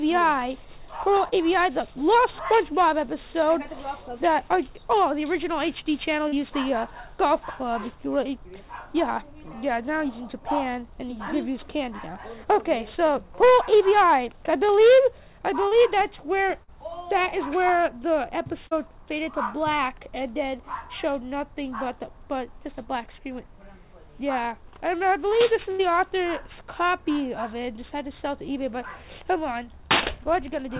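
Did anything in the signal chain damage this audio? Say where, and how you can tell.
Yes, and it's the network leg of the call. There's short concealed packet loss at 1.28 to 1.35, 6.28 to 6.35, 15.68 to 15.74, 16.63 to 16.71 and 18.68 to 18.74 s. Each is a 40 ms hole that the receiver papered over by stretching the preceding sound for roughly 30 to 45 ms before crossfading back, so you hear a quick smear or wobble rather than a clean dropout.

At 25.71 to 25.82 s there's a burst of packet loss, about 80 ms gone in one go. That's too long to hide, so the concealment keeps extrapolating the last sound and lets it sag in level, giving a held buzz or fading hiss, and then the audio picks up further along with that stretch simply missing. The G.711 mu-law path itself is doing its normal thing, with nothing above 4 kHz.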